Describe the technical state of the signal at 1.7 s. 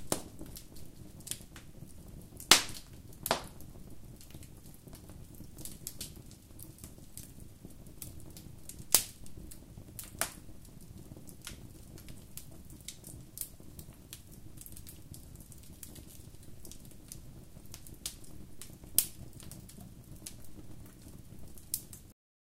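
At 1.7 s the signal is intact, with nothing wrong to be heard at that point.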